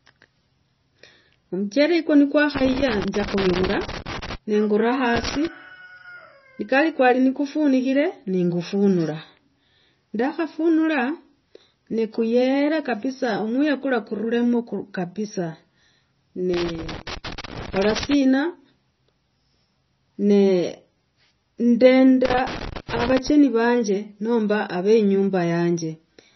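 Throughout, the speech is dull and watery, with nothing above 5.9 kHz and swirling, chirpy sibilants. This is heavy MP3 compression, likely from a starved encoder, which fits roughly 24 kbps. Unlike broadband noise, the damage tracks the speech itself, cutting the treble and flickering weak detail.

Loose connector crackle comes in irregular bursts from 2.55 to 4.35 s, 5.14 to 5.47 s, 16.54 to 18.14 s and 22.25 to 23.29 s. A contact is making and breaking, chopping the signal. Its scratchy, uneven texture sets it apart from smooth codec swirl or single clicks.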